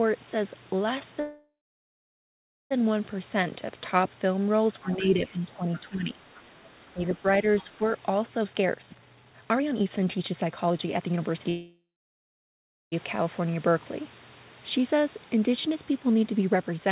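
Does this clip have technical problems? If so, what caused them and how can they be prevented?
Yes, this speech clip has four kinds of problems.

There are two call audio freezes, from 1.2 to 2.73 s and from 11.49 to 12.94 s. In each, the sound trails off into a fading buzz and then sits silent for roughly 1.2 s and 1.1 s, before picking up exactly where it left off. Nothing is lost, but about 1.5 s and 1.4 s of delay get inserted. The likely cause is packets stalling in the network until the jitter buffer ran dry. A steadier network path or more headroom in the jitter buffer would prevent it.

Speech suppressed in double talk shows up from 4.82 to 6.19 s and again from 6.93 to 7.26 s. The talker's level sags and thins out in patches while the far end is talking, by up to about 15 dB across roughly a second in the first stretch, and about 10 dB over a fifth of a second in the second. That's likely the echo canceller failing to tell local speech from loudspeaker echo and ducking both. 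A headset, or a canceller with better double-talk detection, would help.

The other side's voice leaking through appears as brief scraps at 5.73 to 5.81 s, 6.36 to 6.41 s and 7.57 to 7.64 s. They sit about 25, 30 and 25 dB below the main speech. This is likely leftover loudspeaker echo that the canceller didn't fully remove from the mic. A headset or better acoustic echo cancellation would stop it.

Jitter buffer speed-up hits from 8.41 to 11.48 s, where the speech runs at 141% speed with unchanged pitch and sounds rushed. About 1.5 s is trimmed out in small pitch-period chunks so the buffer can drain a backlog. It happens again more gently from 16.02 s to the end, at 112% with about 0.1 s removed. Smoother packet delivery, so delayed packets don't arrive in bursts, would prevent it.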